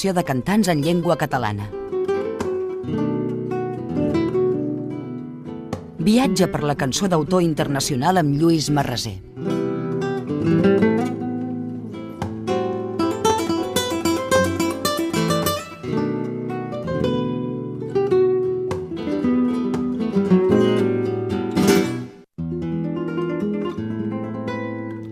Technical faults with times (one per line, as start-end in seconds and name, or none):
none